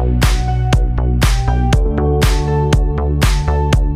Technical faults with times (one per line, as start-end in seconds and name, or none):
none